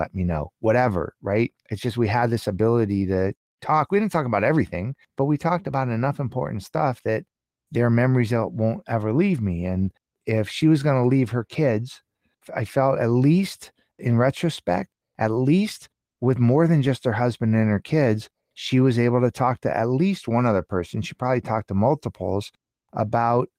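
No technical faults can be heard anywhere in this speech recording. Nothing in the audio points to a problem in how it was captured, processed or delivered.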